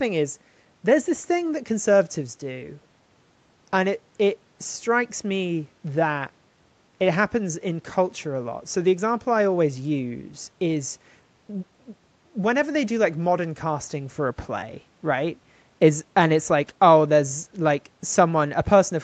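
No technical faults can be heard in this speech; it has the usual sound of a call, with nothing above 8 kHz.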